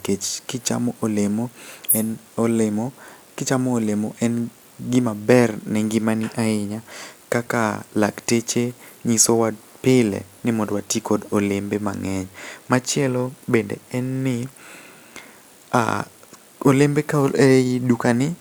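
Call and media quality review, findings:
No audible faults found.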